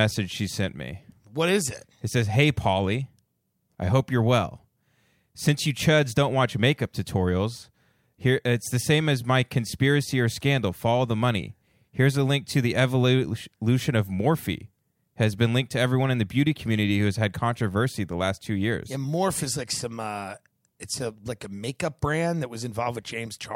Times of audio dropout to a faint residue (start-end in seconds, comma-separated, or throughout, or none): none